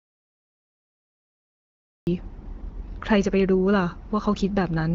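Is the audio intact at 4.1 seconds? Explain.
Yes, the audio is intact at 4.1 seconds, with no fault at that moment, and the speech there carries the light, band-limited character of the AMR wideband (HD Voice) path at about 15.85 kbit/s, with nothing above roughly 7.5 kHz.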